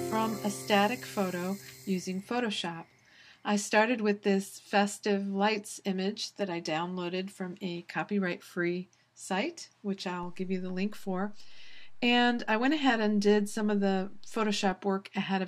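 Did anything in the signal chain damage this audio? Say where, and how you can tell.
Yes. A DC step entered at the converter or analogue input stage: at 10.23 s the waveform's zero line jumps to an offset of about -41 dBFS, as happens when a converter recalibrates or an input carrying a standing offset is switched in. The offset holds until 14.72 s, then steps back. Each transition is heard as a low thump or click, while the sound itself carries on unchanged through the shifted section.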